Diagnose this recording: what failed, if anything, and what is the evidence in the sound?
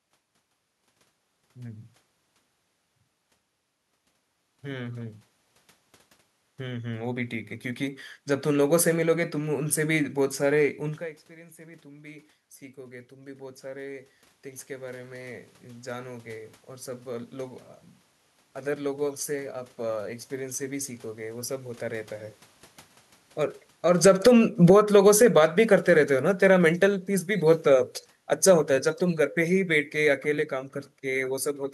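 The automatic gain falling happens in call processing, from 8.44 to 10.76 s (about 3 dB) and from 23.77 to 31.47 s (about 14 dB). Speech and room noise sink together and smoothly, so this is the gain control pulling down, not a talker leaning away.

The automatic gain rising also happens in call processing. Around 11 s the talker moves back and the input drops about 17 dB. From 10.99 to 22.39 s the gain climbs about 14 dB, and the room noise swells along with the speech. A talker stepping closer would bring the speech up without raising the background.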